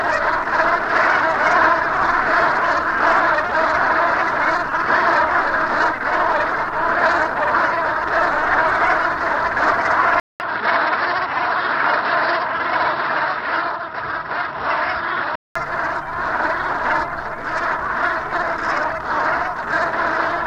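At 10.2 s, a 0.2 s gap precedes dull sound with nothing above 5.6 kHz and new quiet background noise until 15.56 s. This is likely an input switched to a poorer device, not a filter, given the gap.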